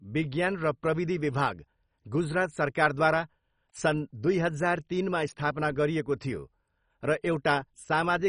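MP2 compression throughout: the speech sounds dull, with nothing above 10.4 kHz and heavy gurgling granularity, likely from starved sub-bands at a rate near 32 kbps.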